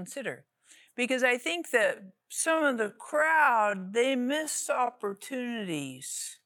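At 1.80 s, right after "I think", a time-stretched section begins and runs to the end of the clip. The pace drops abruptly to about 0.57 times normal speed while the pitch stays put. Software likely stretched this part to fill a set length, repeating short slices of sound to pad it out. The audio drags through "to have a".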